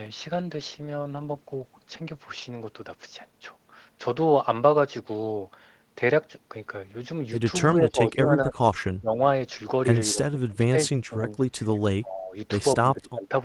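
From 0.36 to 4.25 s a call bitrate drop, from 32 to 18 kbps for about two seconds at its lowest, coarsens the coding and leaves the speech rougher and duller. At 7.75–8.81, 9.01–9.19, 10.12–10.75, 10.92–11.32, 12.0–12.35 and 12.82–13.31 s the speech dips by roughly 15 to 25 dB or cuts out in pieces, likely speech suppressed in double talk by the echo canceller.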